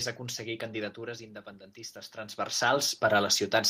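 From 0.18 s to the end, the automatic gain is rising. The input dropped by about 11 dB, so the gain control slowly pushed its level back up. Voice and room noise swell together. Level shifts from the talker moving, near 1 and 2 seconds, sit under this climb.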